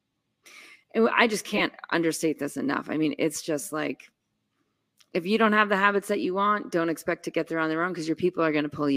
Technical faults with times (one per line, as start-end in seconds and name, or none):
1.53-1.62 corrupt frame decoded